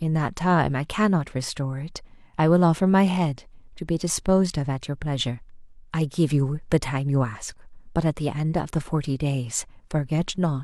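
No technical faults are audible.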